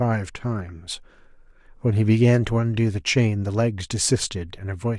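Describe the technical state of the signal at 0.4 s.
At 0.4 s the speech signal is intact, with no audible fault at that moment.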